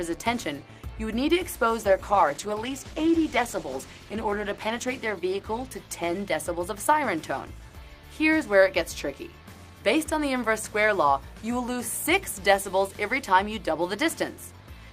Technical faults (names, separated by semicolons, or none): call bitrate drop